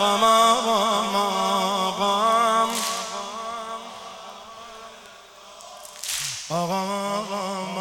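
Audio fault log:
1.15 s, 4.30 s and 5.06 s: bit error spike. A single bit flipped in stored or transmitted sample data, so one sample value jumps by a power of two and returns immediately. Each is heard as an isolated sharp tick with energy across the spectrum and no relation to the surrounding sound. The ticks peak at about −36, −30 and −24 dBFS. The last one is the loudest and spans a short run of adjacent samples rather than one.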